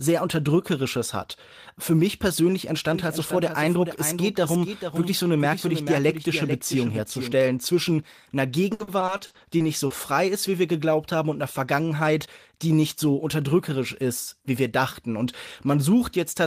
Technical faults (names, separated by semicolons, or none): doubled audio track; repeated packet loss (robotic sound); jitter buffer speed-up